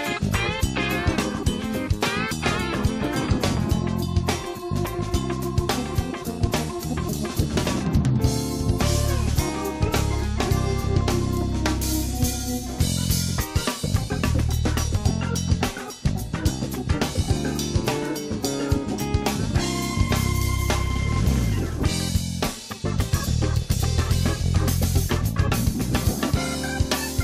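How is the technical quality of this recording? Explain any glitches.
No glitches can be heard anywhere in the recording. There is nothing in the audio that needs explaining as a technical fault.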